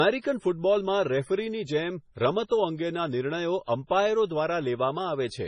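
The speech carries heavy MP3 compression damage throughout. The treble stops at 10.5 kHz, and weak detail turns watery and swirly as frequency lines drop in and out, which fits a low bitrate near 24 kbps. A spectrogram shows a hard ceiling and flickering gaps.

From 2.47 to 2.51 s, just before "અંગેના નિર્ણયો અમ્પાયરો", there is pre-echo. The coding noise for a sharp attack spreads about 33 ms ahead of it, so a short hiss comes first and the onset smears. The waveform shows noise rising before the transient.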